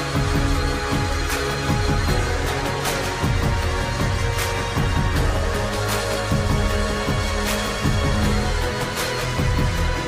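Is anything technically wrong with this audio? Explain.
No, nothing technically wrong can be heard in this audio. Nothing in the sound points to a problem in how it was captured, processed or delivered.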